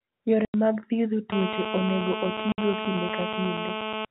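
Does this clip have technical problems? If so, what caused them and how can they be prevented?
Yes. There are two kinds of fault.

Packet loss filled with silence occurs twice. The sound drops out from 0.45 to 0.54 s, just before "mag thiedho", a 90 ms hole. It drops out again from 2.52 to 2.58 s, a 60 ms hole. Both gaps are dead silent, with hard edges. Both lengths are multiples of 30 ms, which points to 30 ms packets lost on the network. Packet loss concealment and a jitter buffer would bridge such gaps smoothly.

GSM phone buzz starts at 1.32 s, right after "mag thiedho", and runs to 4.05 s. It is a hard, raspy buzz at 217 Hz, rich in harmonics and unrelated to the speech. It stays nearly steady, as it does during an active call. It sits about 4 dB below the speech, so it is very prominent. A 2G phone transmits in bursts 217 times a second, and the audio circuitry rectifies those radio pulses into sound. 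Keeping phones away from the microphone and cables, or using shielded wiring, would prevent it.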